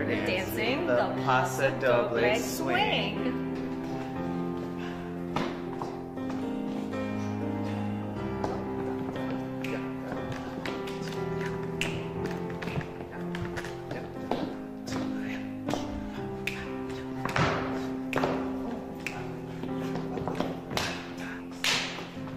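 No technical faults are audible.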